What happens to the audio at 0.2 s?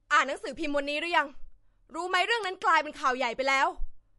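At 0.2 s, as through the whole clip, the speech is likely low-bitrate audio saved at a high bitrate: a 48 kbit/s MP3 re-encoded at 320 kbit/s. The larger file cannot restore what the first pass discarded, so nothing sounds above 11.3 kHz, leaving the speech dull and band-limited.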